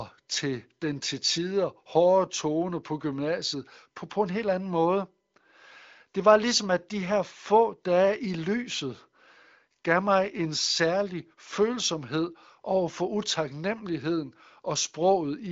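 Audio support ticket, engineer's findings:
Nothing to flag here: the speech stops at about 7.5 kHz and sounds clear, which fits AMR wideband (HD Voice) running at one of its higher rates, around 18 kbit/s, so the codec is behaving as it should.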